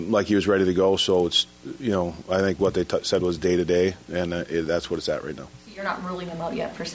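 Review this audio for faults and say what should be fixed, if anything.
From 1.0 s to the end, a 20 Hz buzz from the resampler restarting on every block: each 50 ms block is converted alone, leaving edge errors. Unlike mains hum, it follows the signal. Carry filter state across blocks.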